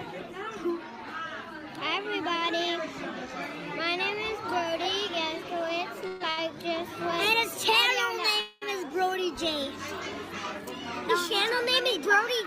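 Call audio freeze at 6.07 to 6.22 s and again at 8.41 to 8.64 s: the sound is carried on as a fading buzz or hiss for about 130 ms and 210 ms, then resumes where it left off with nothing lost. The likely cause is packets held up in transit until the jitter buffer emptied, each pause pushing the audio later by that amount. A short stall from a late packet follows at 6.30 to 6.39 s, where the receiver stretches the last sound for about 70 ms until the overdue packet arrives. That holds the sound too long, with a slight buzz or dip, and adds the same 70 ms of delay.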